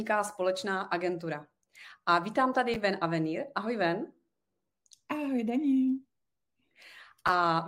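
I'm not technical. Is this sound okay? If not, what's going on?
No. Chunks out of order at 2.74–2.76 s and 7.27–7.29 s: a 10 ms slice of speech plays one slot late, causing a brief jumbled moment. Nothing goes missing, unlike a dropout.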